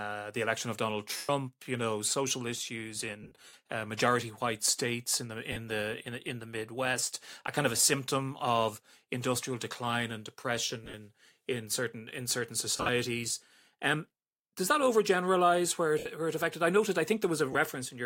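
Lost LE Audio frames at 1.17–1.29, 3.23–3.55, 5.52–5.57, 7.77–7.87, 10.84–10.94, 12.76–12.89, 15.99–16.06 and 17.53–17.55 s: the decoder repeats the last spectrum with random phase, smearing the speech into a brief noisy hiss.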